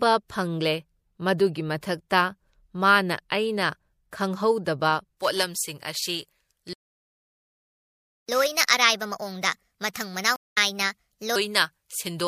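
From 5.17 s, right after "ꯃꯊꯛꯇ ꯃꯥꯅ ꯑꯩꯅ ꯈꯪꯍꯧꯗꯕ", pre-emphasis is left on: a J.17-style treble boost with no matching de-emphasis lifts 10 kHz about 11 dB above 1 kHz, making the speech thin and sibilant to the end, with a visibly brighter upper spectrogram. At 6.73 s a playback stall silences the output for 1.55 s, likely because the player ran short of data, leaving a flat gap in the waveform and a blank vertical band on the spectrogram until 8.29 s. Catch-up at higher speed follows from 8.29 to 11.36 s: the backlog plays at 1.25 times normal speed, raising pitch about four semitones, so harmonics sit visibly higher and further apart before dropping back. Within that stretch, at 10.36 s, a stream reconnect cuts in 201 ms of silence; the audio resumes at 10.58 s slightly further on, skipping a fraction of a second, with a brief faded-in onset visible on the waveform.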